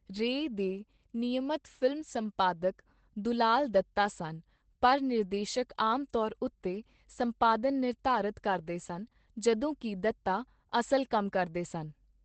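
Speech with Opus voice compression throughout: muffled, hoarse and faintly robotic, which fits coarse SILK coding near 12 kbps, and a spectrogram shows nothing above 8.4 kHz.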